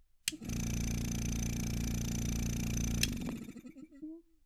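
A sudden voltage pulse, likely from a plug, switch or static discharge, adds a single loud pop from 3.29 to 3.31 s, roughly ten decibels above the continuing sound.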